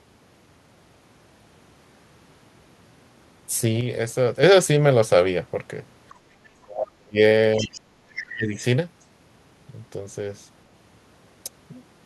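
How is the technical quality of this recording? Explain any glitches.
The recording has several level faults and an unstable echo canceller in its middle section, between about 6.1 and 8.6 s.

A sudden gain jump occurs twice. From 3.81 to 4.43 s the level falls by 6 dB, and from 8.80 s to the end it falls by 5 dB. Both happen instantly, and the voice and the background noise drop together. A gain setting was likely applied in one step with no ramp. Because the noise floor moves with the voice, this is not a canceller reacting to the far end.

The background is gated by the echo canceller from 6.14 to 6.36 s. For about 200 ms the room tone sinks by up to 11 dB while the loudspeaker plays, then recovers. The talker's voice is not involved. Only the ambience ducks, which separates this from the double-talk dips.

Speech is suppressed in double talk at 6.64 to 7.19 s, 7.60 to 7.77 s and 8.27 to 8.62 s. 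The talker's voice drops by roughly 35, 20 and 25 dB, the first dip lasting about half a second. The likely cause is the canceller failing to separate near speech from far-end echo and attenuating both.

The other side's voice leaks through at 7.58 to 7.81 s and 8.11 to 8.24 s. It sits around 15 dB below the talker. This is likely residual loudspeaker echo the canceller missed. It is a second voice added on top, rather than a loss of level.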